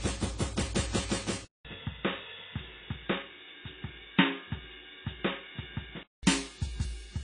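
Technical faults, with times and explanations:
Throughout: AAC compression. The music sounds dull and smeared, with nothing above 10.1 kHz and a warbling, fizzy texture on sustained notes that is plainly audible. This is likely low-bitrate AAC-LC coding, which fits a rate of about 24 kbps. At that rate the encoder lowers its cut-off and quantises the remaining frequency lines coarsely against its hearing model, so it leaves gaps in the spectrum that shimmer and swirl as the music sustains.
1.45–6.23 s: input switched to a poorer device. The music drops out for about 0.2 s, then returns boxy and narrow, with nothing above 3.8 kHz and a faint new background hiss well beneath it, though the overall loudness barely changes. At 6.23 s the fuller sound returns. The likely cause is the recording input jumping to a lower-grade microphone or headset path. That device's narrower band, its own tone and its own noise replace the original capture until the input switches back.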